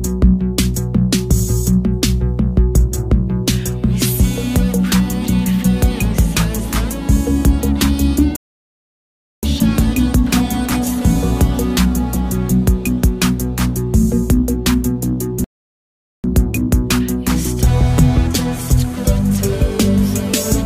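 Rebuffering stalls at 8.36 s and 15.44 s: the player exhausted its downloaded audio, fell silent for 1.07 s and 0.80 s, then resumed exactly where it stopped.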